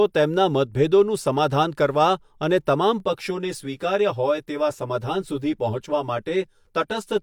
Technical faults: channel delay (comb filtering)

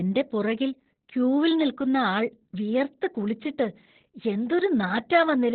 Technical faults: Opus voice compression

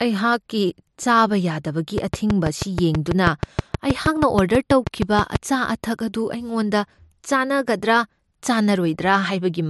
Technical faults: train of clicks

